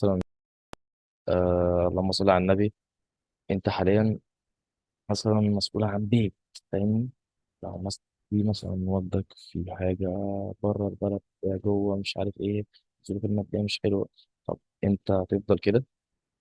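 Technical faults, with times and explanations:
8.52–10.15 s, wrong sample rate: speech slows to 0.92x and drops about 1.5 semitones, fitting 24 kHz audio played at 22 kHz; spectrogram harmonics shift downward.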